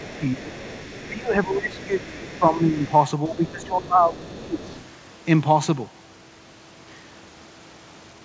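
From 0.0 to 0.54 s, 1.07 to 2.8 s and 3.27 to 4.75 s the speech dips by roughly 10, 20 and 15 dB. This is speech suppressed in double talk, likely an echo canceller attenuating the near talker while the far side was active. Underneath, from 0.05 to 2.95 s, 3.26 to 3.66 s, 4.21 to 4.32 s and 4.66 to 4.84 s, the other side's voice leaks through faintly, about 25 to 30 dB below the speech, likely residual loudspeaker echo that the canceller left in.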